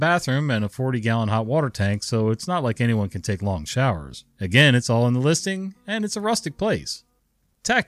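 No technical faults can be heard anywhere in the speech, so there is nothing to describe in time order.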